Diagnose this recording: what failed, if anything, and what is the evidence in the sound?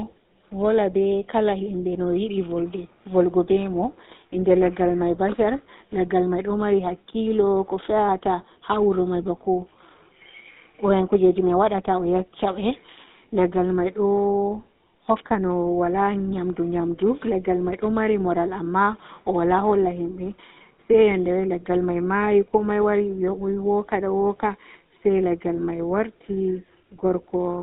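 The failure is at the codec stage: the whole speech recording has passed through the GSM full-rate codec, and the damage is plainly audible. The band runs only from about 150 Hz to 3.7 kHz, with nothing above. Voiced sounds carry a buzzy, gravelly roughness. The codec rebuilds the voice from a vocal-tract model excited by coarse, regularly spaced pulses, a reconstruction consistent with a 13 kbps full-rate encoder.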